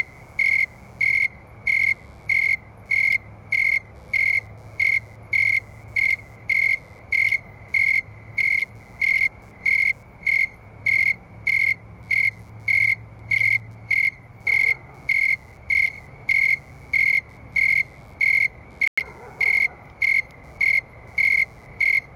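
A faint buzz runs under the whole clip. It pulses at around 100 times a second, sitting roughly 45 dB below the sound. This is computer activity noise. Processor and graphics load shift the shared ground, so the buzz follows the machine, not the audio.

At 18.88 s the sound drops out for about 100 ms, resuming at 18.98 s. It cuts cleanly to silence, then carries on. This is a Bluetooth stall. Likely, interference delayed packets and the headphone buffer emptied until resent data arrived.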